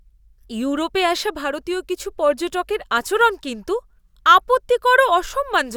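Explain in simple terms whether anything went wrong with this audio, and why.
Just after "আসা ভারতীয় কিছু পর্যটকের", from 2.98 to 3.68 s, the speech has CD scratch ticks: four short regular clicks, the longest lasting about 1.5 milliseconds. A scratch spoils data once per disc turn, and the player patches or silences each gap.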